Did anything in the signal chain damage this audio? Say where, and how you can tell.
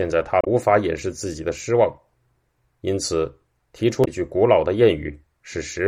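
Yes, at the codec stage: damaged data in a compressed stream. Two short disruptions break the speech, at 0.41–0.47 s and 4.01–4.08 s. Corrupted frames decode as garbage, so the decoder loses sync and hunts for the next valid frame header.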